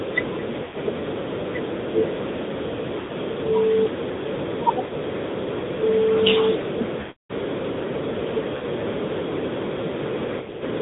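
The whole clip passes through the AMR narrowband mobile codec. Nothing above 4 kHz survives, so the speech sounds thin and boxed in. The coder rebuilds the voice from a vocal tract model driven by sparse pulses. The buzzy, synthetic edge points to a middle rate near 10 kbps. The damage is plainly audible.

Lost AMR speech frames break the speech six times. Radio errors corrupted frames, and the decoder repeated its last good settings with falling gain. Gaps fall at 0.64 to 0.77 s, 3.00 to 3.12 s, 4.84 to 4.93 s, 7.00 to 7.32 s, 8.56 to 8.65 s, and 10.38 to 10.64 s. The short ones briefly draw the sound out. The 300 ms gap at 7.00 s stretches the sound, then fades to silence. The last is a scattered cluster of brief runs.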